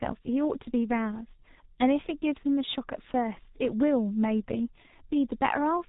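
From start to finish the speech carries heavy G.723.1 codec damage. Nothing passes above 3.8 kHz, and the slowly updated voice model leaves it muffled and hoarse with smeared consonants, which fits about 6 kbit/s. A plain low-pass filter would muffle without that hoarseness.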